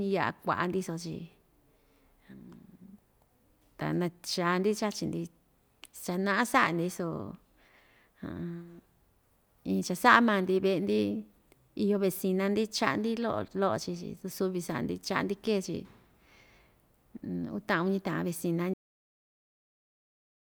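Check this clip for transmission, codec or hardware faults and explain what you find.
One fault is present, a cut-off end. At 18.74 s the speech stops mid-sound and drops straight to digital silence with no decay, because the final buffers were never written or played out.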